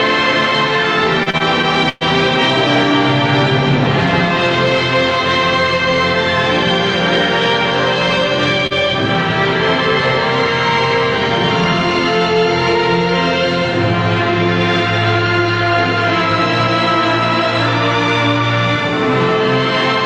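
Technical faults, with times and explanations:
1.23–2.03 s, repeated stalls (stutter). Late packets emptied the jitter buffer five times. The receiver held the last sound for 214 ms in all, up to 116 ms at once. Nothing is lost, but the audio drags and stutters.
8.67–8.73 s, short stall from a late packet. One packet arrived 39 ms late. The receiver stretched the last sound for 39 ms, then resumed. Nothing is missing.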